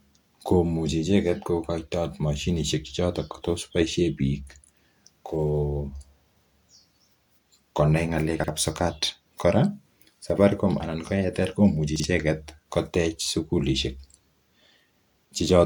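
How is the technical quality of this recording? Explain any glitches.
The recording has two brief glitches of the same kind in this speech.

Chunks out of order, from 8.40 to 8.48 s and from 11.96 to 12.04 s. In each spot a 40 ms block of audio arrived late and was played one block after the one that should have followed it, so two neighbouring pieces swap places. Nothing goes missing, but the sequence breaks, leaving three hard joins around a short jumbled moment in the speech.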